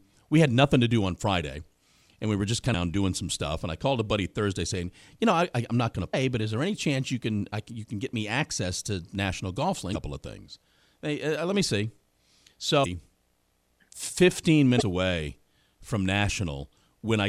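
Damaged data in a compressed stream leaves frames the decoder misreads, so it loses sync and briefly glitches for about 40 ms at 2.71, 6.10, 9.92, 12.82 and 14.77 s.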